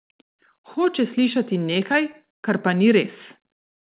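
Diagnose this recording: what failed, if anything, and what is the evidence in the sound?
Network stage: scattered short gaps between 1.74 and 2.32 s, about four lost or late packets, none longer than roughly 15 ms. The receiver filled each hole by carrying the last sound forward, so you hear brief ticks and smears instead of dropouts, over the call path's 4 kHz band.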